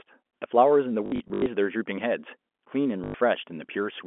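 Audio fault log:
1.06 to 1.46 s and 3.04 to 3.14 s, packet loss with last packet repeated. Gaps are filled by replaying the last packet. The first span loses 240 ms in bursts up to 80 ms. The second is one 100 ms run. Runs buzz near 50 Hz, which fits 20 ms packets. The telephone-band speech stutters robotically.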